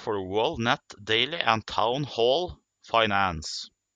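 A short speech recording, and nothing is technically wrong with it.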